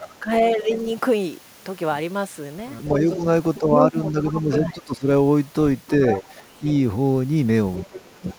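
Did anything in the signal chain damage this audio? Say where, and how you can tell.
Yes, in call processing. Speech is suppressed in double talk at 0.0–0.7, 2.92–5.07, 6.19–6.61 and 7.89–8.38 s, dipping up to about 20 dB. Echo cancellation likely ducked both talkers.

The other side's voice leaks through at 0.72–0.95, 3.11–4.57, 5.87–6.61 and 7.77–8.19 s. It is nearly speech level around 3.1–4.6 s. Echo removal was likely incomplete.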